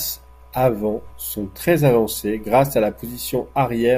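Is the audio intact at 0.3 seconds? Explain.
Yes, at 0.3 seconds the speech runs intact, with no dropout, click, distortion or other fault audible at that moment.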